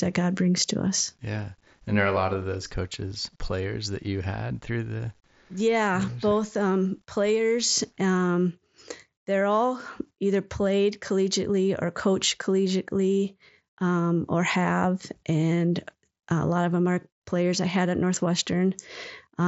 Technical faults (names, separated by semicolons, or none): none